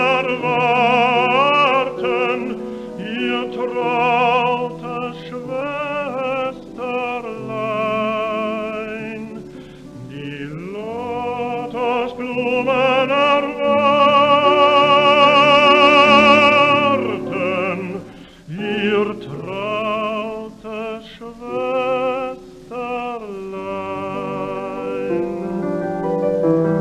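Nothing technically wrong can be heard in this audio, so there are no fault times or causes to report.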